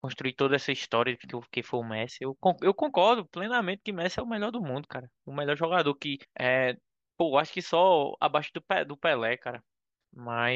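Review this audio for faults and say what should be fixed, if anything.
Damaged data in a compressed stream sits at 6.23 to 6.25 s. Part of the encoded speech there was corrupted, so the decoder could not read the affected frame properly, lost sync, and had to hunt for the next valid frame header before normal playback resumed. The result is a brief, unnatural blip of about 20 ms cutting into the speech. Protecting the stream with checksums or error-resilient framing, and verifying file integrity after transfer, would prevent it.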